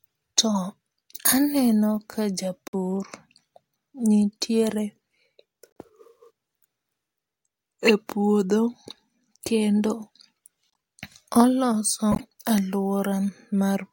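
Four short corrupt-frame-decoded glitches break into the speech: at 2.68 to 2.75 s, a single instant at 5.67 s, at 10.73 to 10.75 s, and at 12.12 to 12.2 s. Each time, a few compressed frames arrived with damaged bits, and the decoder played them anyway. Misread gains and codes threw energy into the wrong frequencies, giving brief chirpy, noisy blips. The first and last are quite loud, while the middle two are faint.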